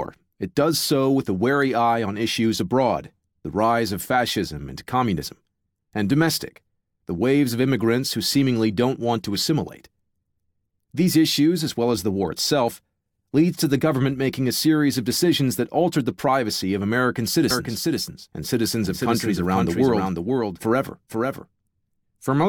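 Speech with a doubled audio track from 17.51 s to the end. A second full-band copy lags about half a second, roughly 5 dB quieter. It starts abruptly. A second capture path likely caused it.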